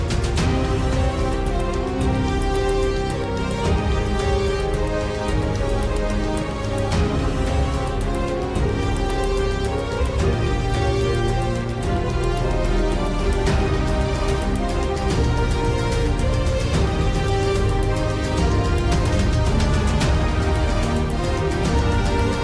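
No technical faults can be heard anywhere in the audio. Nothing calls for a fix.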